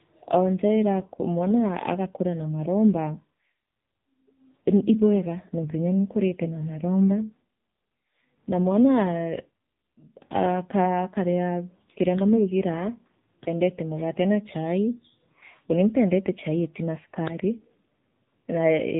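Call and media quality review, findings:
Buzzy, synthetic speech, nothing above 3.8 kHz, throughout: AMR narrowband mobile codec, heavy damage; sparse-pulse vocal-tract model at a starved rate, fitting the 6.7 kbps AMR-NB mode.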